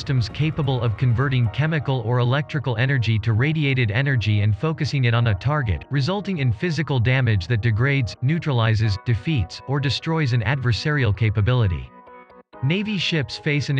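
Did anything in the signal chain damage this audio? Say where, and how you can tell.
No, nothing in the signal chain has damaged this audio. No stage between capture and playback leaves any audible trace of trouble.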